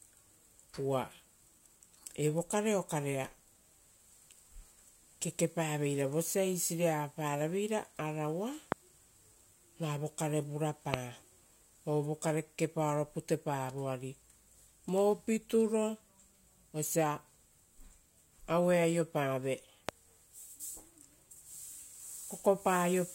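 Speech, with three loud pops. They fall at 8.72 to 8.74 s, 10.94 to 10.96 s and 19.89 to 19.91 s. Each is a single sharp pop lasting about 20 ms. Each peaks roughly 20 dB above the speech. The speech continues unbroken underneath each one. The likely cause is a sudden voltage step or pulse, from a plug, switch, static discharge or driver glitch, added to the signal and shaped by the circuits after it.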